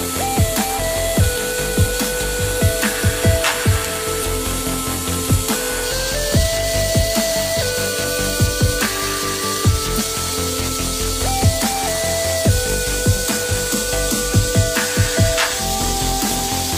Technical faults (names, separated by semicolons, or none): compressed frames skipped